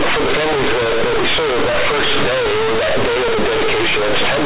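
Companded audio read as linear runs from start to finish. The speech was coded in mu-law, but the bytes are played back as plain 8-bit samples without expansion. Every sign change throws the waveform across roughly half its range, so quiet passages come out as loud as peaks and the shape is badly bent. The result is harsh, very loud buzzing distortion, with heavy noise filling the pauses, over a band that still stops near 4 kHz as telephone coding would.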